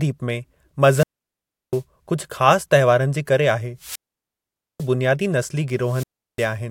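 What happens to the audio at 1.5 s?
At 1.5 s the speech is inside a wireless microphone squelch dropout running from 0.86 to 1.83 s. The FM radio link fades, and after a brief rise of hiss the receiver's squelch mutes the output for about 0.70 s before the speech returns.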